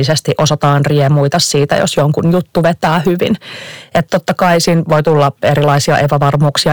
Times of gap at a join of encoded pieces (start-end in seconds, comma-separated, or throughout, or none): none